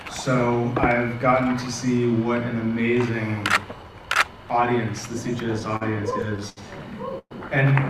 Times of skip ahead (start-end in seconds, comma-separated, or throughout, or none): none